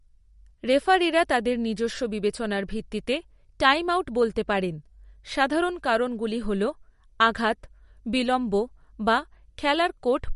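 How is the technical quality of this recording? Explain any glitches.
The recording has plainly audible compression damage throughout. MP3 compression, throughout: likely a low-bitrate MP3 encode, consistent with about 48 kbps, cutting the treble at 11.2 kHz and dropping weak components, so the speech sounds dull, watery and swirly.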